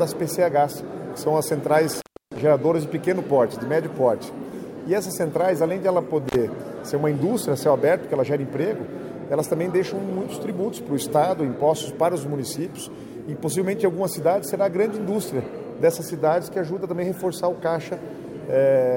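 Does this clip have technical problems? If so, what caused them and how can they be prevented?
Yes. Intermittent contact occurs at 1.94 to 2.38 s and again at 6.28 to 6.36 s. A loose cable or plug briefly breaks the signal path, so the audio drops out for about 308 ms in the first event and 50 ms in the second, with crackle as the contact opens and closes and faint hiss while the line is open. To prevent it, seat connectors firmly and replace worn cables or jacks.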